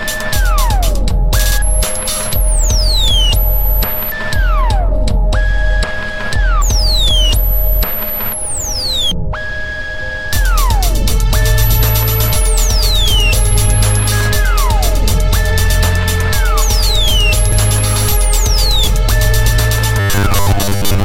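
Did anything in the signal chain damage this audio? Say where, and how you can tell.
Yes. A CD skip at 17.52 s in playback: a brief mute of a few milliseconds, a tick, then a jump elsewhere in the track, visible as a waveform discontinuity.

From 20.00 to 21.04 s, robotic sound from repeated short buffers, likely a starved driver buffer. Most of the audio is replaced by repeats, producing a rigid 100 Hz buzz that fits a roughly 10 ms buffer. On a spectrogram this appears as harmonic lines every 100 Hz.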